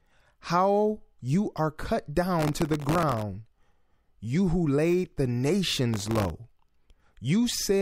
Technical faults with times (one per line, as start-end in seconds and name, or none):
2.39-3.22 processor overload crackle
5.94-6.30 processor overload crackle